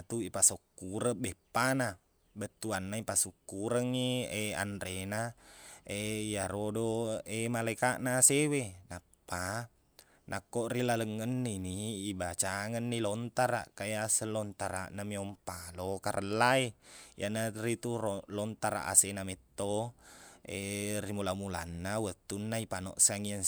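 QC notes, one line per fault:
No faults heard in this speech clip.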